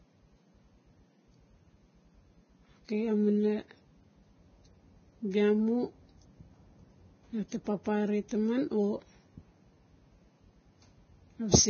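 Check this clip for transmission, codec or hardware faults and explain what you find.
One fault runs through the whole recording: heavy Vorbis compression, likely at a very low bitrate of around 16 kbps. Squeezed that hard, the encoder discards everything above 6.5 kHz and quantises the remaining treble so coarsely that fine detail is replaced by similar-energy noise. The speech therefore sounds dull yet hissy and grainy, with roughened tones and smeared consonant attacks.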